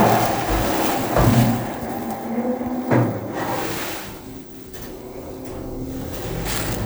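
Listening to this recording of everyday sounds, nothing stood out as a technical problem.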